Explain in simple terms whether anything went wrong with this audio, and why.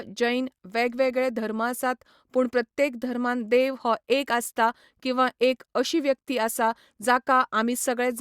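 Nothing went wrong with this recording.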